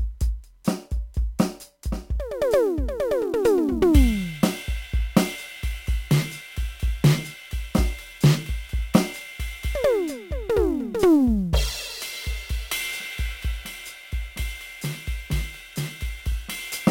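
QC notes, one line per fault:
Throughout, sample clock jitter: the converter clock wanders by around 10 microseconds, so samples land early or late and steep waveform slopes pick up error about 20 dB below the music. On a spectrogram this appears as broadband haze that thickens under loud, bright passages.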